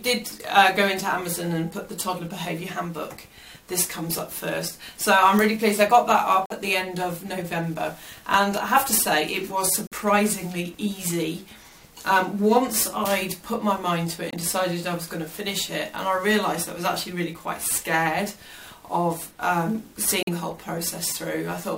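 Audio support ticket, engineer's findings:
Abrupt silent dropouts at 6.46 s (64 ms), 9.87 s (60 ms), 14.31 s (42 ms), 20.23 s (64 ms). Corrupt frame muted: decoder rejected bit-flipped frames, player inserted silence, timing kept.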